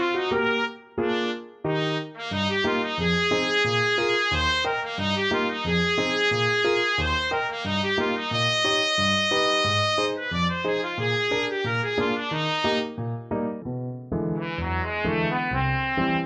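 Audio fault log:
13.62–16.26 s: section at the wrong speed. The final stretch of sound suddenly plays slower, at 0.718 times its original rate, so everything drags and sits about five semitones lower in pitch, heavy and sluggish compared with what came before. Because playback rate and pitch are tied together, both shift at the same instant and stay shifted to the end. The likely cause is that this section was rendered or played against a mismatched clock rate.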